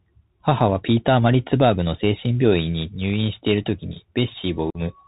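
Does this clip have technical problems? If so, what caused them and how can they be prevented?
Yes. A Bluetooth CVSD headset codec runs through the whole clip, with plainly audible damage. The speech sounds like a 64 kbps CVSD link, where each sample is a single up-or-down bit and the step size keeps adjusting. Everything above 4 kHz is gone, so the speech is muffled. Loud, bright moments outrun the step and distort, s sounds come out scratchy, and a grainy hiss sits underneath. Switching the headset to a wideband profile such as mSBC or LC3, or using a wired microphone, prevents this.

Unconcealed Bluetooth headset packet loss occurs from 4.70 to 4.78 s. About 45 ms of audio drops out, which fits a handful of short voice packets failing to cross the radio link between headset and phone. Nothing in the chain patched over the gap, so silence or an idle pattern fills it. The result is a hole with abrupt edges, and the speech returns briefly quieter as the CVSD decoder's step size recovers. 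Keeping the headset close to the phone, away from Wi-Fi and other 2.4 GHz interference, and using a link with packet loss concealment prevents this.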